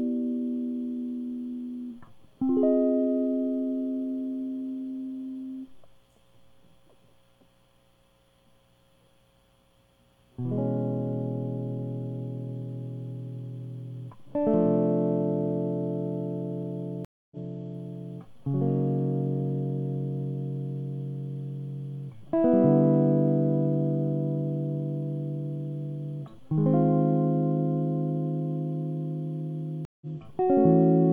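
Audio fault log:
17.05–17.37 s and 29.85–30.06 s, stream reconnect: the music drops out for about 265 ms and 161 ms, then resumes roughly 0.2 s further along as a fresh decoder picks up the live stream. On a spectrogram or waveform, each gap is a blank vertical band, with the material on either side not matching.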